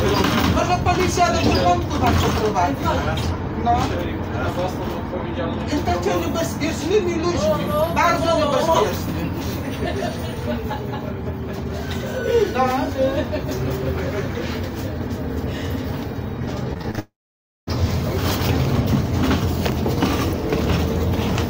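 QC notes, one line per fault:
16.73–16.99 s, repeated packet loss (robotic sound): choppy stutter as five short gaps, the longest 26 ms, are patched by stretching the preceding sound. About 100 ms goes missing, and roughly 38% of this stretch is filled-in rather than real audio.
16.99–17.69 s, long network dropout: a brief decaying buzz or hiss trails off into about 0.56 s of silence before the sound returns at 17.69 s with a piece absent. The likely cause is a lengthy network interruption, with about 0.68 s never delivered.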